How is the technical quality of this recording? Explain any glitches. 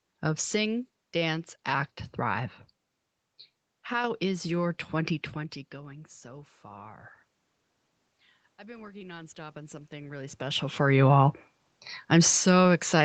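There is one glitch, an automatic gain rise, heard against speech limited to about 8 kHz. From 8.58 to 11.09 s the input drops by about 19 dB. The automatic gain control responds by raising gain about 6 dB, gradually. Voice and room noise swell together.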